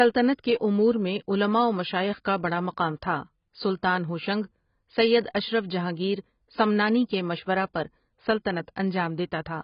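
AAC compression is the likely cause of the damage heard throughout the speech: nothing sounds above 5.2 kHz, leaving it dull and smeared, with fizzy, warbling sibilants. Heavy quantisation of each frame's spectrum fits a very low bitrate around 16 kbps.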